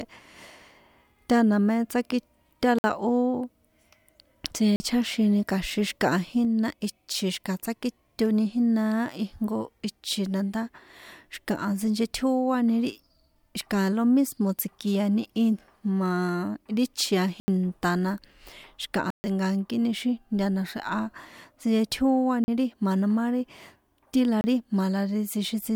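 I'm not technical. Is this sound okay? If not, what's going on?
No. Six times the speech briefly cuts to total silence (a block of digital silence): at 2.79 s, just after "tána mé tsaki ta", then 4.76, 17.4, 19.1, 22.44 and 24.41 s. Each gap lasts from about 0.03 to 0.14 seconds, with the longest at 19.1 s. Unlike a fade or a quiet pause, the sound stops and restarts instantly. The cause is usually the playback or recording software missing its timing.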